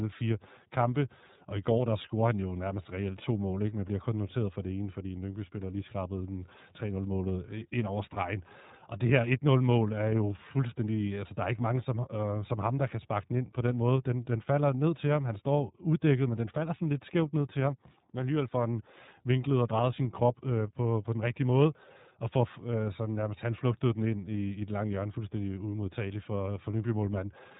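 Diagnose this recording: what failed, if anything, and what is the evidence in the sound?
Codec stage: iLBC coding throughout, with a spectrogram blank above 3.8 kHz, plainly rough, synthetic speech, consistent with its 30 ms, 13.33 kbps mode.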